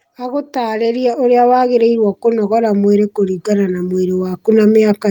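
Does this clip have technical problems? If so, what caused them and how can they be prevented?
Yes. Automatic gain rising runs from about 0.05 s to 5.1 s. The automatic gain control judged the incoming level too low and pushed its gain up gradually rather than in a step, so the speech and the background noise grow louder together across the whole clip. Because the change is applied to everything in the signal, the noise floor climbs in step with the speech. To prevent it, disable the automatic gain control and set a fixed input gain suited to the source level.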